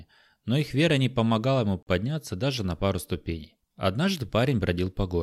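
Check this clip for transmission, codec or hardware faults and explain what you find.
One fault is audible in this speech clip: a gap consistent with a Bluetooth stall. From 1.83 to 1.87 s the audio cuts to silence for about 43 ms, then resumes. This is likely a Bluetooth stall. Radio interference delays packets on the wireless link, the headphones exhaust their buffered audio, and playback halts until retransmitted packets arrive. The result is a short, clean dropout rather than distortion, after which the signal continues either from the point it stopped or slightly further on, if queued audio was discarded.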